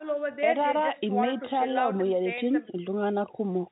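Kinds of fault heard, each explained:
No fault can be heard in the clip. The speech arrives over a WebRTC call path that sounds consistent with G.711 mu-law at 64 kbps, with nothing above 4 kHz.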